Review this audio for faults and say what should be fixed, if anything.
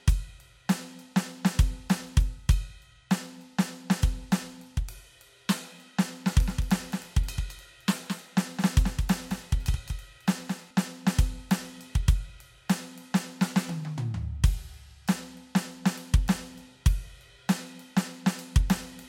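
Doubled audio track from 6.33 to 10.71 s: a dry, abruptly switched copy about 200 ms late and about 5 dB down, likely from a duplicated capture path. To prevent it, route each source through a single capture path and check edits for overlapping copies.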